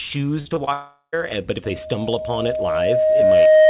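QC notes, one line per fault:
0.40–0.69 s, repeated packet loss (robotic sound): the speech goes choppy here. There are four short holes, the longest about 52 ms, and each one gets patched by stretching out the last bit of sound before the next hole arrives. Over this stretch roughly a third of what you hear is that patching rather than real speech, which is where the robotic edge comes from.
0.73–1.14 s, long network dropout: right after the choppy bit, the audio stops coming through for about 0.4 s. The receiver keeps the last sound going as a tail that fades out, then there's a short patch of near silence, roughly 70 ms, before the speech picks up again with that chunk missing. This is most likely the network losing the stream for a moment rather than anything at the source.
1.64 s to the end, loudspeaker feedback squeal: just after "but if", a tone at 623 Hz starts creeping in and keeps swelling for roughly two seconds. 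By the end it sits about 15 dB above the speech. That's the classic mic-hears-its-own-speaker loop, where one frequency has more than unity gain around the loop and just keeps feeding itself, so it's heard as a single tone. It comes through the narrowband call path, with nothing above 4 kHz.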